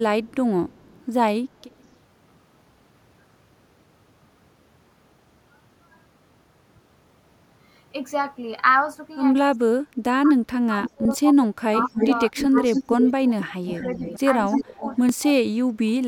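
From 0.25 to 1.04 s, and again from 1.62 to 1.95 s, a faint trailing copy of the speech follows about 196 ms behind, well below the main speech and fainter in the second stretch. This is echo leak. The far end is likely playing the call on a loudspeaker, and its echo canceller let some of that pickup through and back down the line. The leak returns at 10.84 to 10.9 s as a louder scrap, about 15 dB under the speech. From 11.78 to 14.99 s it becomes a sustained echo, now about 268 ms late and nearly as loud as the speech itself.

Between 9.51 and 14.05 s the speech repeatedly dips and chops out, falling as much as about 30 dB and losing roughly two seconds in total. From 14.48 to 16.06 s it drops out again for about 0.7 s. This is speech suppressed in double talk. With both sides talking at once, the canceller likely could not separate the local talker from the returning echo, so it turned both down.

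A sudden jump in the sound lands at 11.05, 14.16 and 15.09 s. Roughly 0.1 s, 0.15 s and 0.05 s of audio are skipped, and there is no gap where the audio was lost. These are dropped buffers (overrun). The capture side likely fell behind, so the hardware overwrote samples before they were read, and the audio on either side was joined directly.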